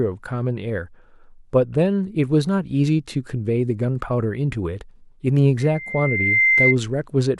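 From 5.60 to 6.76 s, loudspeaker feedback squeal rises. A 2.1 kHz tone swells over most of a second to about 5 dB above the speech.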